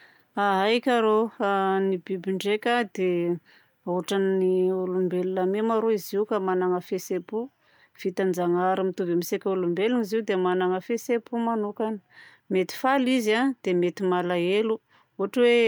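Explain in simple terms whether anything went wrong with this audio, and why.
Nothing went wrong with this speech recording that a listener can hear. There is no moment where the sound is interrupted, damaged or altered.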